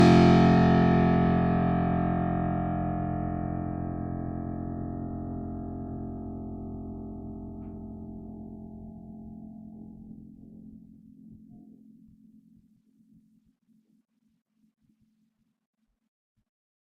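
Across the whole music clip there are layered compression artefacts, most likely from transcoding between lossy codecs: a first pass through something like Vorbis around 53 kbit/s, then re-encoding to Opus near 48 kbit/s. The second encoder spends its limited bits reproducing the first one's artefacts, then adds its own coarse quantisation. The result is a dull top end set by the lower cut-off, with two kinds of artefact audible at once.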